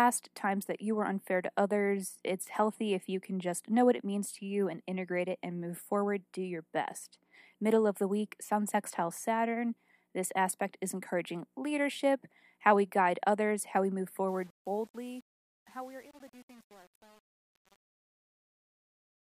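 A speech recording ends with a fade-out running from about 14.3 s to 19.3 s. Right after "others how we move", at 14.28 s, truncation distortion on the fade sets in and lasts to the end at 19.31 s. The level stage drops low bits without dither, which fits an 8-bit path, so the dying tail turns gritty. On a waveform the quiet end becomes coarse square steps, and a spectrogram shows broadband hash instead of a clean taper.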